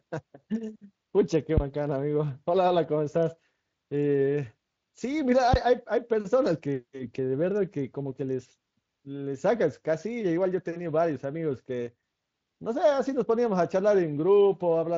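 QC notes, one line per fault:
1.57–1.75 s and 5.54–5.74 s, phantom power thump: a deep low thud dying away in roughly 40 to 46 ms, from a supply switching on a live input and pushing a voltage step through the coupling capacitors.
11.87–12.03 s, sudden gain jump: sound and background noise drop together by about 5 dB in a single step, likely a digital gain change applied instantly without any ramp.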